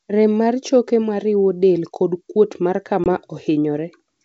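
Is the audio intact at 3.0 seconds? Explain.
No. From 3.04 to 3.07 s the speech drops into a hard-edged silent gap, then resumes with brief, slight distortion. This is packet loss on an ADPCM call: about one 20 ms packet vanished, desynchronising the decoder's predictor and step size until they resettled.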